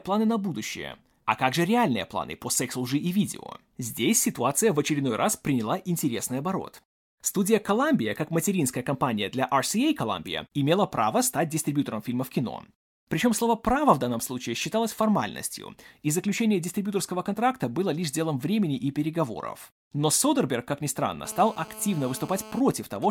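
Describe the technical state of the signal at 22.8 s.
GSM signalling bursts sound from 22.60 to 23.06 s. A nearby 2G phone's radio bursts are rectified by the circuit, giving even 217 Hz ticks with a longer buzz twice a second, about 20 dB below the speech.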